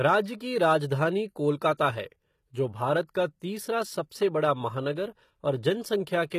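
Throughout, the speech carries plainly audible codec damage, with nothing above 14.9 kHz; this is likely HE-AAC compression, whose treble is rebuilt by copying lower bands upward, consistent with a low bitrate around 20 kbps. From 0.06 to 0.15 s and again from 0.65 to 0.74 s, hard clipping flattens peaks overdriven by about 2 dB and about 1 dB, adding crackle from high harmonics. At 3.14 s, pre-echo puts about 10 ms of codec noise ahead of an attack, heard as a brief hiss and a softened onset.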